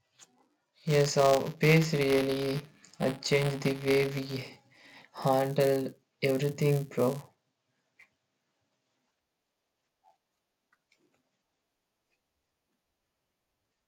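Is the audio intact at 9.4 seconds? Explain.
No. Buffer tearing runs through the whole clip, so 9.4 s is affected like every other moment. The software filling the ring buffer and the hardware reading it have slipped out of step, so each period holds a small sliver of audio about 10 ms old, spliced in with hard edges. That repeating splice gives a robotic buzz at 172 Hz, which fits a 256-sample buffer, audible over the speech and absent in silence.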